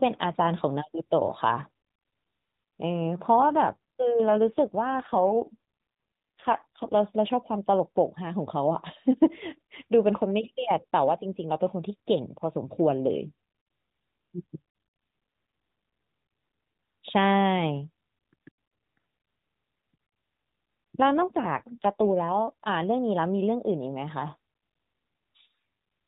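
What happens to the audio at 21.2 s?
At 21.18 s an AMR rate drop sets in and lasts until 22.37 s. The speech keeps its narrowband telephone band of nothing above 4 kHz, with no gap, but turns rougher, buzzier and more synthetic for that 1.2 s stretch, consistent with the AMR-NB encoder stepping down from about 12.2 kbps to 5.9 kbps. With fewer bits, fewer excitation pulses describe each subframe, until the higher rate returns at 22.37 s.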